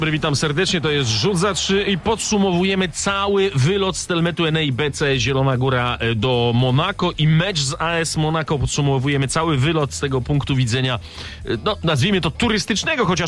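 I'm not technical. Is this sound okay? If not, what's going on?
Yes, nothing in this audio goes wrong from a technical point of view. There is no glitch or other fault to point out anywhere in it.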